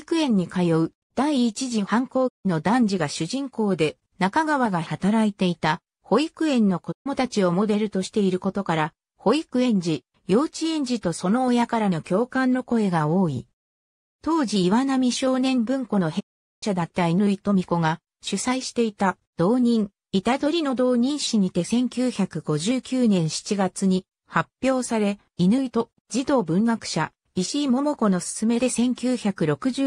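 A digital broadcast dropout, where the receiver loses frames and mutes until clean ones return, cuts the audio three times: at 2.27 s for 160 ms, 6.91 s for 128 ms, and 16.19 s for 416 ms. Each cut fades down within about 20 ms, and that stretch of audio is simply gone.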